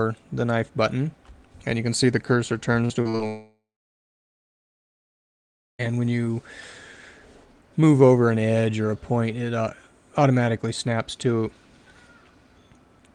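From 2.85 to 3.21 s the sound turns choppy and mechanical: repeated packet loss, giving the robotic sound typical of it. Audio arriving over the network was lost several times in quick succession, and each hole was patched by stretching out what had just played. The gaps are short, the longest about 45 ms, but together the patches cover nearly half of that third of a second. This brief rapid stutter differs from a single long break because real sound keeps returning between the holes.

Right after, from 3.27 to 5.81 s, the sound stops for about 2.5 s, which points to a long network dropout as the likely cause. The last moment of sound is carried on briefly as a fading buzz, then about 2.2 s of near silence follows. When the sound resumes it continues from later on, and whatever came in between is missing. Unlike the stutter before it, there is no sound returning between the gaps, only one sustained hole.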